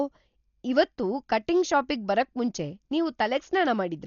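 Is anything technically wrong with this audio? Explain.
Yes. Throughout the speech, heavy coding damage cuts everything above 6.9 kHz and leaves a rough, fluttering noise around tones, likely Dolby Digital compression at a starved bitrate near 40 kbps, where unallocated frequency lines are filled with dither noise.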